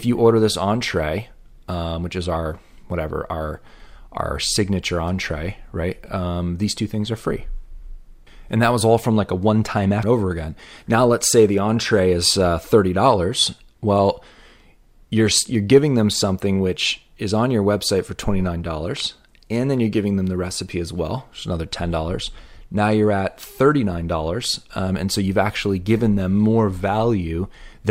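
At 10.03 s, right after "like a one time", the speech jumps abruptly to "over again" with a small blip and no gap of silence. This is a stream segment skipped, likely from a segment that failed to load. Unlike a dropout, the programme leaps ahead instead of pausing.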